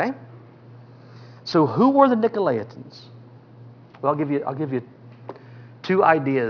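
Aliasing runs throughout: content above 5.5 kHz folds back as gritty, metallic tones about 30 dB down. The spectrogram shows energy crowding hard against 5.5 kHz.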